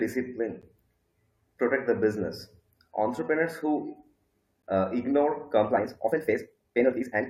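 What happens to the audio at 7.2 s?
At 7.2 s you're inside a time-stretched section that runs from about 5.64 s to the end, squeezed to 1.8 times normal speed. It's likely software fitting the audio to a length, dropping short slices to keep pitch, so the speech sounds rushed.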